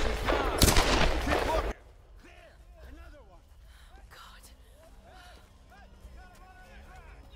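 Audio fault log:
1.72 to 7.36 s, sudden gain jump: At 1.72 s the level falls by about 19 dB in a single step and stays down to the end. The sound and its background noise drop together. The likely cause is a digital gain change applied without a ramp.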